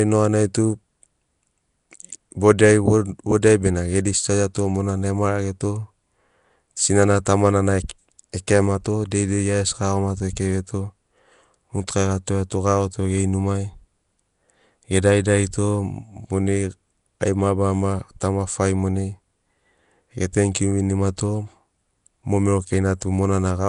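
Throughout, the speech has a rough, hissy halo, a smeared underwater quality, and nothing above 10.6 kHz. This is likely Nellymoser compression, with plainly audible damage fitting a stream near 44 kbps. Starved bands are filled with noise, so they hiss instead of the warbling swirl of low-bitrate MP3.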